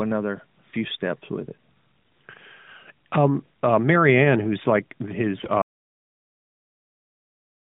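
Around 1.96 to 2.18 s, and again from 5.38 to 5.51 s, there are AMR bit errors: flipped low-priority bits skew the codec's pulses and fine parameters, so the speech goes hoarse and gargly while keeping its pitch and level. Then at 5.62 s the audio drops out to dead silence with no room tone through to the end, likely because the input was lost and the encoder kept writing silence. Around all this, the light narrowband band-limiting fits a mobile codec running at a fairly high rate.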